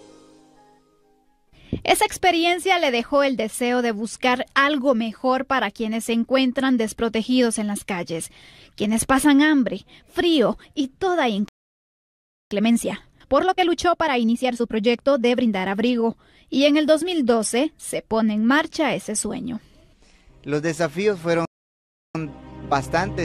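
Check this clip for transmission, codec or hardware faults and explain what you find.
Two playback faults occur, each a stall followed by a hurried recovery.

The playback stall appears twice, at 11.48 to 12.51 s (about 1.03 s) and at 21.45 to 22.15 s (about 0.69 s). The player likely either ran out of buffered data or had its output thread blocked, so nothing reached the output until it recovered. The sound cuts off in mid-flow and leaves a gap long enough to notice in both places.

Time-compressed catch-up follows each stall. From 12.51 to 15.51 s the audio runs at 1.25 times normal speed, and from 22.15 s to the end of the clip at 1.15 times. Having fallen behind, the player works off its backlog by removing small slices and cross-fading across the joins. The pitch stays put, but the material sounds rushed until the backlog is cleared.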